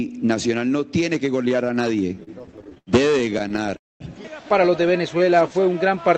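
From 2.15 to 3.75 s, repeated stalls (stutter) break the sound into about two dozen short holds, the longest 90 ms, filling roughly a fifth of that stretch. On a spectrogram these appear as smeared, repeated vertical slices.

From 3.77 to 4.02 s comes a call audio freeze. The last sound continues briefly, then about 210 ms of flat, near-silent waveform follows. The likely cause is packets held up long enough to empty the jitter buffer.

From 5.11 to 5.79 s, a jitter buffer slow-down repeats pitch periods to add 83 ms. Playback runs at 89% speed with unchanged pitch, so the harmonic lines are stretched horizontally.

Throughout, the Opus call path's cut-off near 8 kHz leaves the spectrogram empty above that line.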